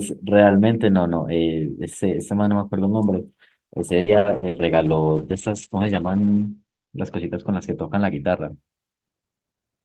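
From 3.67 to 4.57 s the speech turns choppy and robotic. This is repeated packet loss: five gaps, the longest 60 ms, are patched by extending prior sound, covering about 30% of the stretch.

Starting at 4.07 s and lasting until 8.62 s, the audio grows rough and muffled, a call bitrate drop from 32 to 9 kbps that narrows the bandwidth from 20 kHz to 8 kHz, bottoming out for 2.4 s.

From 9.63 to 9.85 s the speech sounds hurried at unchanged pitch, a jitter buffer speed-up running at 114% that trims about 40 ms of pitch periods to reduce delay.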